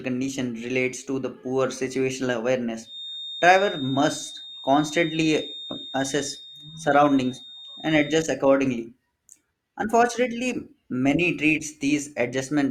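From 2.80 to 8.31 s, right after "to the poor situational", a feedback whistle sits at 3.7 kHz, roughly 15 dB under the speech. A loudspeaker-to-microphone loop likely hovering at the edge of feedback causes it. Unlike a runaway howl, this thin tone swells and fades slowly but never builds.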